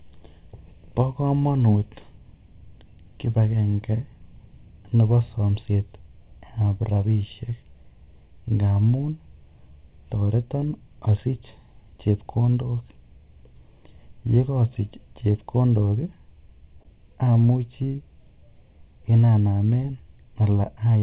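Throughout the speech, channel delay (comb filtering) from a roughly 0.4 ms offset between channels summed to mono puts a first notch near 1.5 kHz, leaving the voice hollow and phasey. Clock drift between sender and receiver is also present throughout: the sender's clock runs about one percent slow, so the receiver's jitter buffer keeps draining and small timing hiccups recur. From 0.41 to 9.73 s, and again from 11.51 to 20.05 s, repeated timing corrections stretch the audio to 99% speed, adding around a tenth of a second each time as small, unevenly spaced edits. This sits on top of a call path band-limited to 4 kHz, which fits G.711 A-law.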